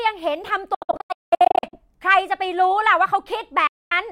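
Between 0.74 and 1.78 s the speech breaks into scattered silent holes, the longest about 196 ms. More audio drops out at 3.67–3.93 s. It resumes ahead, not paused, likely a Bluetooth dropout.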